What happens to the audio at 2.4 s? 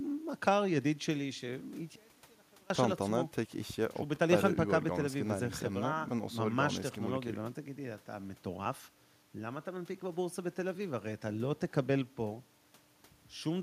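At 2.4 s you're inside an audio dropout to a faint residue, running 1.96 to 2.70 s: the speech suddenly drops to a faint leak about 30 dB down, likely the signal lost while the path stayed live.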